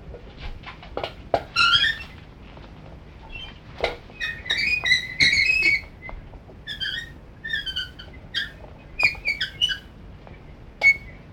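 No technical faults detected.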